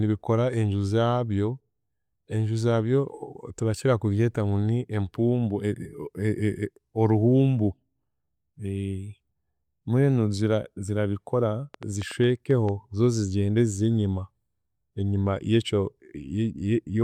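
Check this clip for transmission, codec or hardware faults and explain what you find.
A brief burst of ticking sits over the speech from 11.74 to 12.70 s: a train of clicks, about seven similar pops arriving unevenly at roughly 6.4 per second and peaking about 5 dB above the speech. Likely cause: interference from nearby equipment or a faulty connection or power supply injecting repeated pulses.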